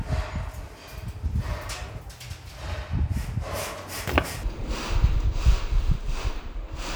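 Stereo read as mono from 4.43 s to the end: the interleaved left and right samples are taken in turn as one channel, so the sound drops to half speed and an octave lower (-12 semitones), with a faint mirrored copy in the upper spectrum.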